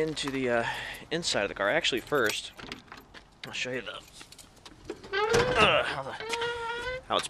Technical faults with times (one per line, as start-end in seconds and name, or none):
none